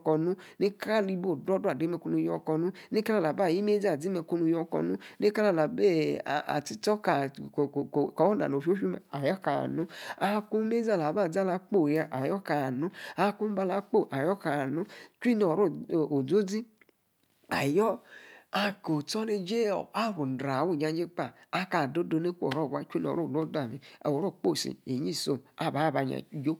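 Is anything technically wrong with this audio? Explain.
No technical faults are audible.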